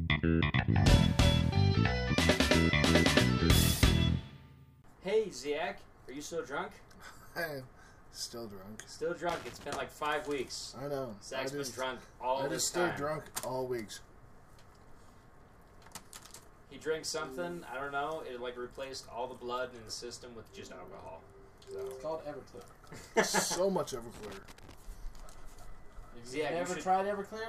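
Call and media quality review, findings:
Loose connector crackle, 9.29–9.64 s and 24.14–24.74 s: irregular scratchy bursts, a worn or dirty contact making and breaking, chopping the signal. Reseat or swap the cable/jack.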